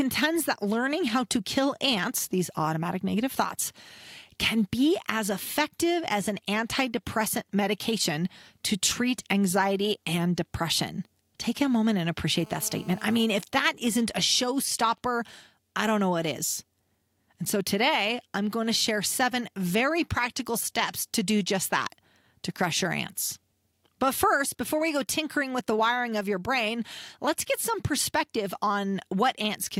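Speech, with GSM interference from a nearby 2G phone. Right after "a moment and", from 12.36 to 13.25 s, a GSM phone buzz appears. It is a hard, raspy tone at 217 Hz, rich in harmonics and about 23 dB below the speech. The phone is in a call, transmitting steady radio bursts, and the audio circuit rectifies them. From 13.30 to 15.34 s, ending before "I don't know what", GSM signalling bursts follow. They form a pattern of even ticks with a longer 217 Hz buzz twice a second, roughly 30 dB down. The phone's user has fallen silent, so it sends only sparse burst groups.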